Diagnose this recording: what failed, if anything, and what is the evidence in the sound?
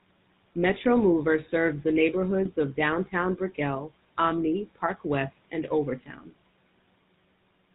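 The whole clip has a buzzy, gravelly roughness, and nothing above 4 kHz gets through, so the speech sounds boxed-in and grainy throughout. That is plainly audible damage from the GSM full-rate codec, consistent with its 13 kbps coding. The damage happens at the codec stage. The encoder models the vocal tract and excites it with regularly spaced pulses, keeping only every third excitation sample. That coarse excitation is the source of the buzz.

At 2.45 to 2.49 s there is a brief squawk and gargle, a sudden distortion where the spectrum bends or the level jumps. These are GSM bit errors, a network-stage fault. Corrupted bits, at an error rate of about 0.95 percent, reached the speech decoder, which fits a couple of damaged frames. Wrong filter, pitch or gain values were decoded, so the output was briefly shaped or scaled incorrectly.

From 6.00 to 6.31 s the speech suddenly goes faint and swallowed for about a third of a second, dropping by about 13 dB. 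This is speech cut by the noise suppressor, a call-processing fault. The suppressor mistook part of the speech for background and turned it down along with the noise. The room noise sits about 24 dB below the speech.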